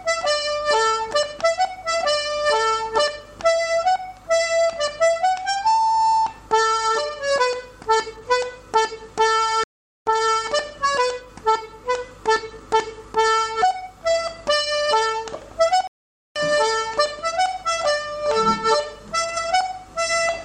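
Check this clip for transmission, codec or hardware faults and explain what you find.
Two playback stalls break the audio. Playback stall at 9.64–10.06 s and 15.87–16.36 s: the output goes silent for about 0.43 s and 0.48 s, likely because the player's buffer ran dry or its thread was blocked.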